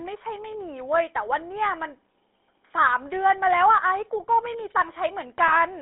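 From the start, the speech carries GSM full-rate codec damage. Only about 300 Hz to 3.6 kHz survives. The pulse-driven vocal model leaves a plainly buzzy, gravelly roughness.

At 5.48 to 5.53 s, GSM bit errors strike. Corrupted filter, pitch and gain values garble a couple of frames into a brief squawking gargle.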